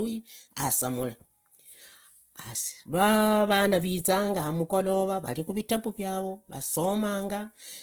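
From start to finish the speech has a grainy, rough texture, with the bands sounding filled in by noise rather than carved out, so there's little swirl but plenty of fizz. That points to Opus compression, likely in its music (CELT) mode, starved for bits at a rate that fits around 16 kbps. The bandwidth is still fullband, reaching up to about 20.2 kHz, but the damage is plainly audible throughout.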